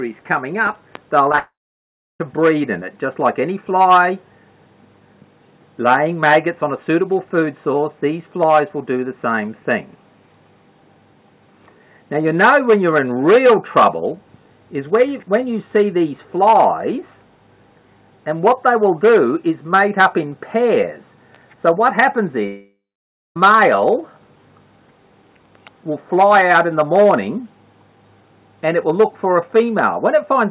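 Short concealed packet loss hits three times in quick succession, at 1.29 to 1.31 s, 1.32 to 1.34 s and 1.36 to 1.39 s. Each time a slice of about 10 to 20 ms failed to reach the decoder, and the receiver patched it by extending the preceding sound before easing back into real audio. The result is a rapid flutter of tiny smears or wobbles, with any very short sound in those gaps at risk of disappearing.

A long network dropout follows directly, from 1.39 to 2.21 s, and another runs from 22.47 to 23.37 s. In both the sound carries on briefly as a fading buzz or hiss, then gives way to silence for roughly two-thirds of a second in the first case and a little over half a second in the second. The audio resumes later without the missing stretch, most likely because no packets arrived for that period. Throughout, the G.711 A-law call path leaves nothing above 4 kHz, so the concealment fills sit in that narrow band.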